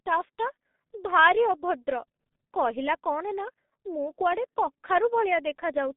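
Throughout, the speech passes through the G.723.1 codec, which models the voice in coarse 30 ms frames at a very low rate, consistent with 6.3 kbit/s. The band is confined to roughly 150 Hz to 3.6 kHz, leaving the speech heavily muffled and hoarse with smeared consonants.

At 4.18 s, VoIP packet loss concealed by the speech codec occurs. The decoder bridges a gap that fits one lost 30 ms frame by extending its last pitch and filter, producing a brief, fading patch of stretched sound before the voice recovers.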